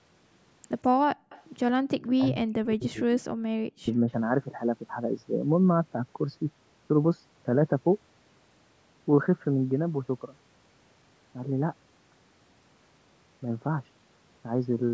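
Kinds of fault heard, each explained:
Background gated by the echo canceller: From 1.15 to 1.29 s the room sound suddenly sinks by about 39 dB, for roughly 150 ms, then comes back. The canceller clamped the mic hard while the far-end loudspeaker was playing, so the ambience briefly disappears.
Echo leak: Right after, from 1.29 to 1.42 s, you can hear a faint delayed copy of the speech, about 176 ms late and roughly 25 dB below the talker. It's likely the far end's canceller failing to remove all of its loudspeaker pickup and sending that remainder back.
Speech suppressed in double talk: The talker's voice drops by around 40 dB from 2.18 to 3.31 s, and again from 3.69 to 3.9 s. It's likely both sides talking at once, with the canceller unable to separate the voice from the echo and turning everything down.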